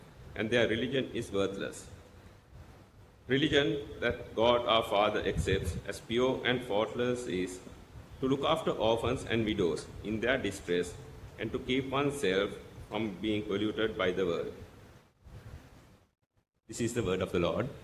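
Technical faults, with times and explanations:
Nothing stood out as a technical problem on listening.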